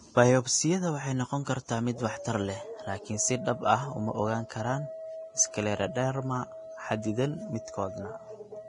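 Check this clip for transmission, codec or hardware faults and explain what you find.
One codec fault runs through the whole recording. From start to finish the speech sounds hissy and grainy, its tones roughened and its consonant onsets smeared. Nothing sits above 10.6 kHz, and the damage is heavy, which fits Vorbis compression at a low bitrate near 29 kbps. The likely cause is an encoder that cut the top band and quantised the remaining treble so coarsely that its fine detail turned into noise-like grit of similar energy.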